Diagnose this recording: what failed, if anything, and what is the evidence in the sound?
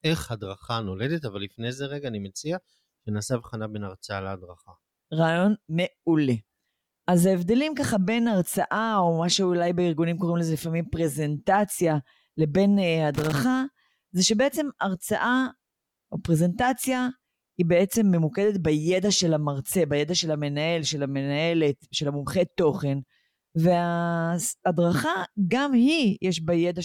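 The analogue wiring failed briefly: loose connector crackle from 13.14 to 13.39 s, an irregular quarter-second burst of scratching over the speech. A worn or dirty contact is intermittently making and breaking, chopping the signal, with pops where any DC on the line jumps.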